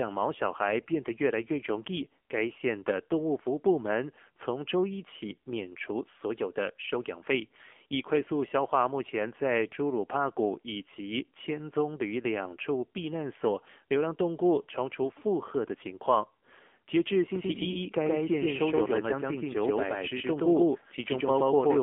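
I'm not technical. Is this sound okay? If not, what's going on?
No, there are two problems. The first runs through the whole clip. It sounds like an old mobile phone call, because it went through the AMR narrowband mobile codec. That system keeps only a thin middle slice of the sound. Nothing above about 3.5 kHz gets through, and the low end is thin too. The codec rebuilds speech from a simple model of the throat and mouth. At this quality the damage is easy to hear. Speech comes out buzzy, muffled and a little artificial.

The second problem starts at 17.36 seconds and lasts to the end. From there you hear a doubled audio track. A second copy of the same speech plays about 150 milliseconds behind the first. It is roughly as loud as the original. It sounds like a sharp, dry stutter, not a room echo. The copy switches on suddenly. This is likely caused by the sound being captured twice, once through a slower path.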